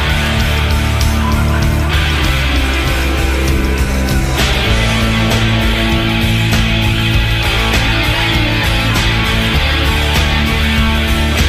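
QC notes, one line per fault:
No faults detected in this clip.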